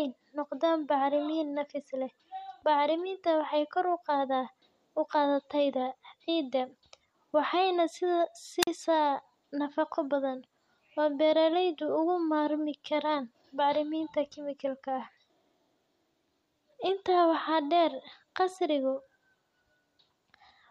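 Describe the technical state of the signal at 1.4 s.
At 1.4 s the speech signal is intact, with no dropout, clipping, distortion or other fault at that moment.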